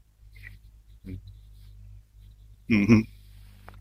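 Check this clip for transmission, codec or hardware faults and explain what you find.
One fault, at 2.54 s: a brief glitch in the speech, from damaged data in a compressed stream that made the decoder lose sync and jump to the next frame.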